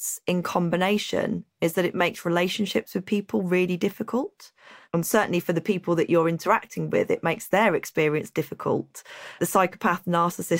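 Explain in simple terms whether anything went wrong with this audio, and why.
From 0.22 s to 10.51 s the speech carries faint, evenly spaced ticks, about seventy of them, roughly every 0.15 s. These are clock slip clicks, likely from two devices running on unsynchronised clocks about 150 parts per million apart, so a single sample gets dropped or repeated at each tick.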